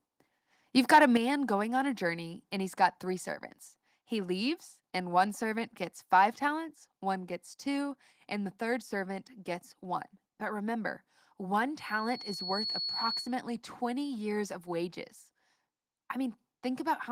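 A speech recording opens with a harsh, crackling edge from 0.93 to 1.05 s, where the loudest peaks are flattened about 4 dB past the converter's limit and a small share of samples are clipped. This is microphone overload, likely from an input gain set too high for the converter. At 1.17 s, just before "going on a journey", voice and background drop suddenly by about 7 dB in a single step. That is the microphone volume stepped down, likely the call software lowering the input gain right after the clipped peak. From 11.77 to 13.37 s, after "remember one", a single tone at 4.4 kHz swells over roughly a second until it is about as loud as the speech. This is a loudspeaker feedback squeal: the microphone picks up the loudspeaker it feeds, and at that frequency the loop gain exceeds one, so the tone keeps growing.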